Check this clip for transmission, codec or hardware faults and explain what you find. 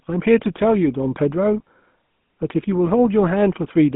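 Yes, there's a codec fault running the whole clip. The GSM full-rate codec squeezes the speech into a 150 Hz to 3.5 kHz band and rebuilds it from sparse pulses, which fits a 13 kbps rate, leaving it plainly buzzy and gravelly.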